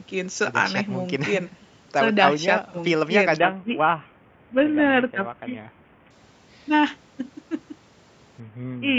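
Speech, passed through call microphone processing that leaves nothing above 8 kHz, suffers a Bluetooth SBC bit pool drop from 3.39 to 6.10 s and again from 8.4 s to the end. In both stretches the treble dulls and a gritty quantisation noise rises, consistent with the bit pool falling from 31 to about 5, near 50 kbps. A steady bandwidth limit would not come and go like this, and packet loss would leave gaps rather than continuous grit.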